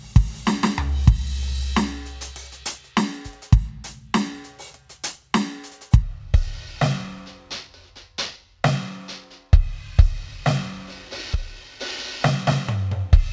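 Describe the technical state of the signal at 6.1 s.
At 6.1 s the music is being played back at the wrong sample rate, a fault running from 6.02 s to the end at 13.33 s. The 2:3 slowdown fits 24 kHz material played at 16 kHz without conversion. Everything runs at 0.667 times speed and drops about 7 semitones, heavy and dragging.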